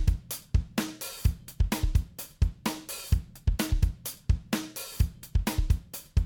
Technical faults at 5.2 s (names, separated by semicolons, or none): none